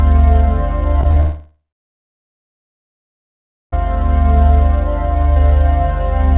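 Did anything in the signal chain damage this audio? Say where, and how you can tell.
Yes. Repeated packet loss (robotic sound) at the network stage, 1.01 to 1.16 s: four short holes, none longer than about 19 ms. Each is patched by continuing the preceding music, so about a third of that span is filled-in sound, giving a choppy texture.

A long network dropout follows from 1.20 to 3.73 s. The last sound is held as a fading buzz, then about 2.1 s of silence, and the music resumes with about 2.5 s gone. Packets stopped arriving, the likely cause.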